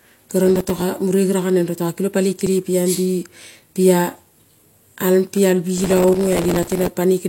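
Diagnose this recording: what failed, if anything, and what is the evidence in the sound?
Processor overload crackle at the driver or buffer stage: gritty tearing from 0.44 to 0.82 s, and again from 5.78 to 6.89 s after "pi al". Each missed deadline replays a few milliseconds of old audio with hard edges, which fits dozens of missed buffers in the first burst and around a hundred in the second. Unlike a splice fault, it is a sustained run of crackle that stops when the load clears.

Overlap between stream segments, in streaming playback: a single tiny skip at 2.47 s, just after "kilong paloi". The player trims an overlap between the time stamps of two 2 s segments, removing audio that was never actually doubled, so the waveform jumps. It is one isolated skip rather than a continuous stretch of grit.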